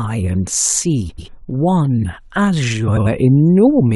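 Frames out of order at 1.09–1.28 s and again at 2.87–3.07 s: in each stretch of about 0.2 s, two adjacent blocks of roughly 93 ms swap places, which fits two runs of four frames being decoded in the wrong order. The speech there plays with its halves exchanged, giving a garbled flutter. No time goes missing.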